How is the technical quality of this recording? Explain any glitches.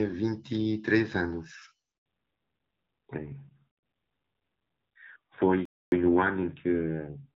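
The recording has three clear glitches: a brief dropout near 2 s, a permanent loss of bandwidth from that point on, and a longer silence later. The opening two seconds carry clean HD Voice speech, with light AMR wideband codec coloration consistent with a rate around 12.65 kbit/s.

Handover gap, 1.98 to 2.06 s: the audio cuts out for 80 ms. When the call was switched between networks, no speech frames arrived while the new link came up, so the decoder had nothing to play. You hear the sound fade within a few tens of milliseconds, followed by dead air. On a waveform this shows as a short flat stretch, and on a spectrogram as a thin vertical blank column.

Fallback to narrowband, 2.06 s to the end: immediately after the gap, the call drops from wideband to an older narrowband codec, consistent with AMR-NB at around 7.4 kbit/s. Everything above 4 kHz disappears, so sibilants lose their edge and the speech turns duller and rougher, like an old landline. 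A spectrogram makes this obvious: energy reaches toward 7 kHz before 2.06 s, then a hard horizontal ceiling at 4 kHz holds for the rest of the clip.

Playback stall, 5.65 to 5.92 s: the output goes silent for about 266 ms in mid-flow, then resumes. This silence is much longer than the handover gap and stops more abruptly. The likely cause is that the player ran short of buffered data or its thread was briefly blocked. On the waveform it appears as a clean flat gap of roughly a quarter second, and on the spectrogram as a wide, fully empty vertical band.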